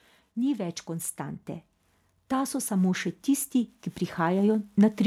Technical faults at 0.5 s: automatic gain rising

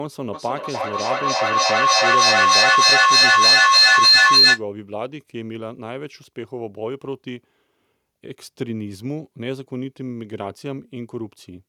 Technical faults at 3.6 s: feedback howl

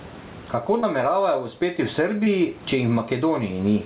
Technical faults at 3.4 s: gain pumping

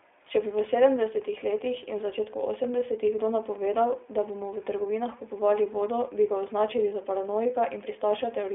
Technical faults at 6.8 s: iLBC codec

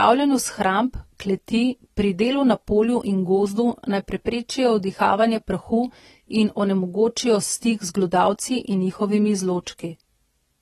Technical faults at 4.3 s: AAC compression; pre-echo

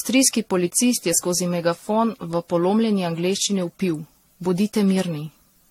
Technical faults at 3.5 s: generation loss

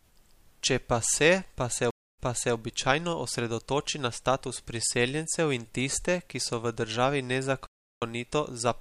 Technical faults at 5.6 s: none

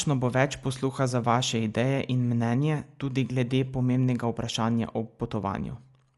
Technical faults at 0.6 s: Dolby Digital compression

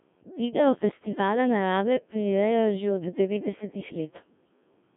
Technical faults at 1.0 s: Codec 2 vocoder

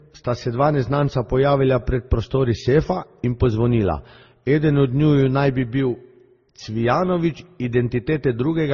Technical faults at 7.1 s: transcoding between lossy codecs

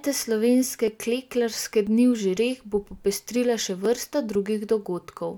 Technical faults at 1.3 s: periodic USB or driver dropouts

